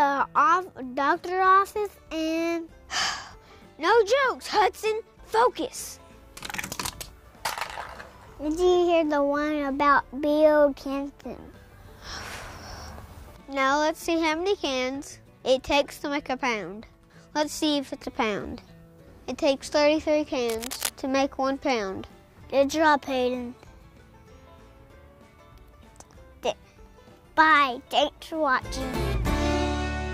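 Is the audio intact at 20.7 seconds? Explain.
No. From 20.49 to 20.89 s a dense, uneven scratching rustle rides over the sound, fairly loud at around 10 dB below it. This is cable scratch noise, likely from a worn cable or connector whose contact resistance flickered as it moved.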